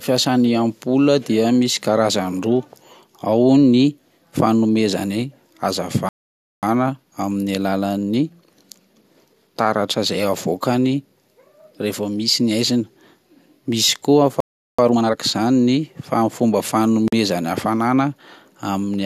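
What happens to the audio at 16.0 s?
Nothing goes wrong at 16.0 s: the speech there plays through intact, with no dropout, click, distortion or other fault.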